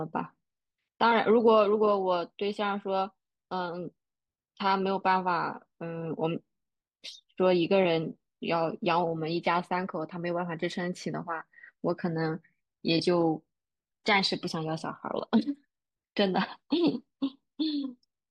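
Nothing stood out on listening to this speech recording.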